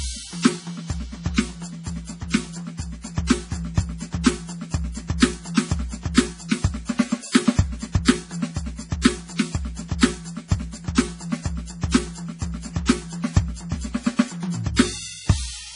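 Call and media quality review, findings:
Watery, swirling music throughout, treble absent above about 10.5 kHz, smeared attacks. Likely MP3 compression, heavy damage fitting a very low bitrate near 32 kbps: encoder cutting the top band and dropping weak frequency lines that flicker frame to frame.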